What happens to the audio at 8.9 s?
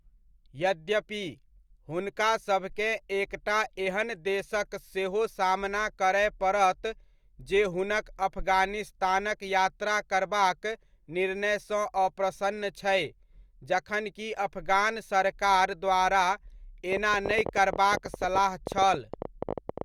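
Nothing goes wrong at 8.9 s: the speech carries straight through that moment with no dropout, click, distortion or other fault.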